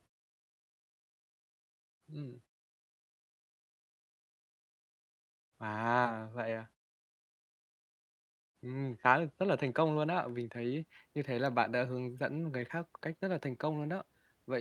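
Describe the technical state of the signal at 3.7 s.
At 3.7 s the speech is intact, with no fault at that moment.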